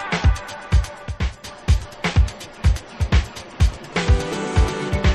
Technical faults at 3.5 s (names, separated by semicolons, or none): none